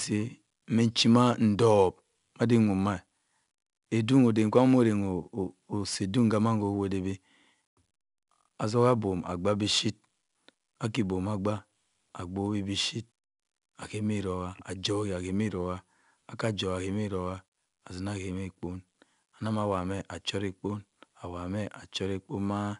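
Speech stored with 4-bit ADPCM compression throughout: each sample is coded as a coarse 4-bit step away from a predicted value, with the step size adapting as the level changes. That quantisation error shows up as a plainly audible gritty hiss that rises and falls with the speech itself. Nothing is present above 10.6 kHz, which points to a reduced sample rate near 22 kHz and fits a data rate of about 88 kbps.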